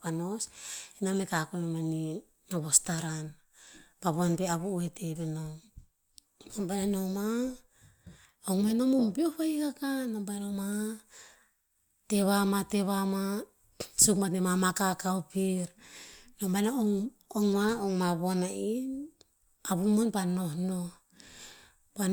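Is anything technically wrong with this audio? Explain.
No, nothing technically wrong turns up here; the speech comes across without any faults to point to.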